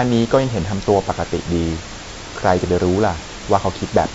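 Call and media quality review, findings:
Low-delay AAC compression, throughout. Speech rough and grainy, noise filling the gaps between pitch harmonics, top band dull and partly synthetic. Likely cause: AAC-ELD encoding at a low rate, fitting about 32 kbps. Short frames near 10 ms give coarse frequency resolution, so harmonics smear and bits run out for the high band. Damage plainly audible. Room noise sits about 14 dB below the speech.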